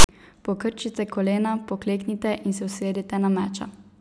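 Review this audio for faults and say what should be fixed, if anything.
The decoder read the file tags as samples (file tags played as audio), so text gives a lopsided hard-edged rasp, then padding silence, from 0.00 to 0.09 s. Prevent it by having the reader skip the tag block before decoding.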